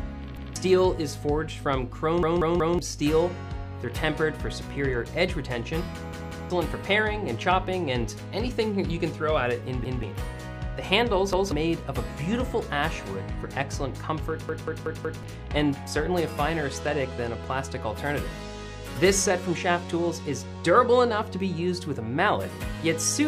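At 0.37, 2.23, 6.13, 9.85, 11.33 and 14.49 s you get a repeated buffer: fresh audio didn't reach the device in time, so it replayed its last chunk. Each chunk runs about 186 ms, which fits an 8192-sample buffer, so these are proper stutters with a hard join, not clicks. The worst ones are at 2.23 s and 14.49 s, with three and four extra plays, and roughly half a second or more of sound goes missing at each.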